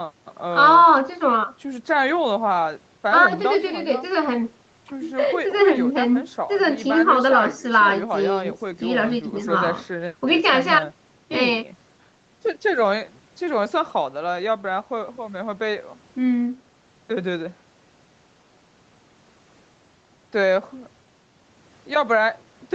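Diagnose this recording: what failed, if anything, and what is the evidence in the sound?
Nothing stood out on listening to this speech recording, which carries the expected call-path character with no content above about 8 kHz.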